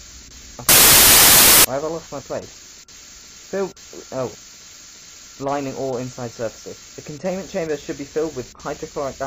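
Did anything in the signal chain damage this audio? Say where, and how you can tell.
Yes. From 0.69 to 1.65 s the audio turns into loud, harsh broadband noise. These are samples built from the wrong bytes, at the sample-format conversion stage. A byte offset or swapped byte order turns the rapidly changing low bits into each sample's dominant part.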